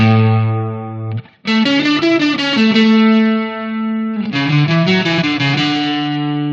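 The signal carries no audible technical faults at any point, with its level, continuity and frequency content holding steady throughout.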